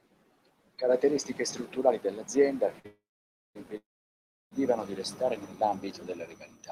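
A speech recording with three playback stalls, all close together. The first is a short stall from a late packet, at 2.79 to 2.86 s, right after "strutturali dell'azienda". The last sound is held for about 50 ms with a slight buzz or dip, then the speech resumes where it left off. Nothing is lost. The receiver's jitter buffer ran dry while one packet was late, and it stretched the previous audio to bridge the wait.

Two longer call audio freezes follow, at 2.86 to 3.57 s and 3.77 to 4.53 s. In each, the held sound decays into silence, lasting 540 ms in the first and 680 ms in the second. Speech then continues from the exact point it stopped. The likely cause is a run of packets delayed in transit, leaving the buffer empty. The gaps add roughly 0.69 s and 0.74 s of delay, but no speech is missing.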